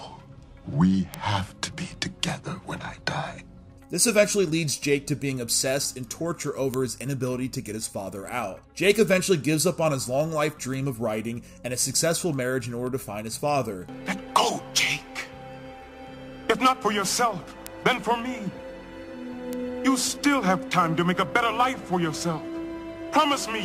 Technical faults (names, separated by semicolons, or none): word clock ticks